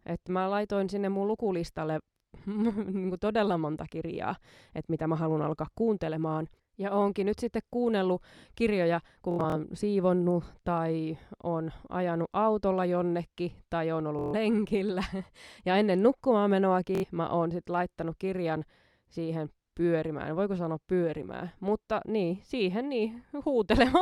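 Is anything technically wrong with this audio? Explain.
Yes. Bluetooth stutter occurs three times in this speech: 9.31 to 9.56 s after "sitten kuunnellut kirjoja kun", 14.19 to 14.35 s after "autolla jonnekin tai on", and 16.95 to 17.04 s after "ennen nukkumaan". Late or lost packets made the receiver replay short slices, heard as a brief buzzing stutter. Speech then resumes further on, skipping about 140 ms, 140 ms and 70 ms.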